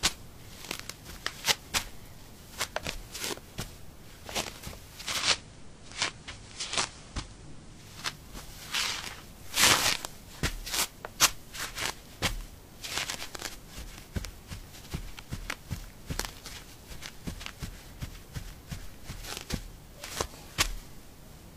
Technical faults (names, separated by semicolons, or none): digital radio blending to analogue